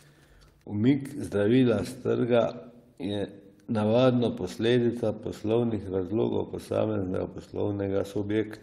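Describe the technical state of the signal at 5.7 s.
At 5.7 s, just after "navadno posledica", a lost packet rebuilt from error correction runs from 5.63 to 5.77 s. The missing audio, about 80 ms of it, was filled from the low-bitrate backup copies carried in the packets that followed each of the four lost ones, so there is no gap but the sound turns briefly rougher and noisier. On a waveform the envelope stays continuous. On a spectrogram the harmonic detail looks smeared and grainier across that span.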